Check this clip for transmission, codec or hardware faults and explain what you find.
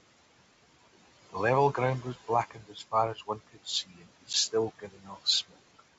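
Three kinds of fault show up here: noise suppressor artifacts across the whole clip, four spots where the suppressor cuts into the speech, and one short packet-loss dropout on what sounds like a G.722 wideband call at 64 kbit/s. The room noise sits about 18 dB below the speech and belongs to the recording, not the system.

Noise suppressor artifacts run from start to finish. The suppressor pulls down whatever bands it judges to be steady noise, by about 17 dB at most, re-deciding every frame. So the background drops away in the gaps and swells back up under the talking.

Speech cut by the noise suppressor happens four times: 2.51 to 2.81 s, 3.15 to 3.67 s, 3.86 to 4.03 s and 5.03 to 5.26 s. Here the suppressor mistook parts of the speech for noise and turned them down along with the background, by about 11, 17, 14 and 9 dB at the deepest points. Only a fraction of each span is actually hit, roughly a tenth to a fifth of a second. 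Soft consonants and word endings there sound swallowed or faint.

Packet loss on an ADPCM call hits at 4.33 to 4.35 s. The gap is about 10 ms of silence, which points to a single lost packet. The hole has hard edges, and afterwards the decoder's adaptive predictor and step size are out of step with the sender's. The speech comes back slightly distorted, then settles within a few tens of milliseconds.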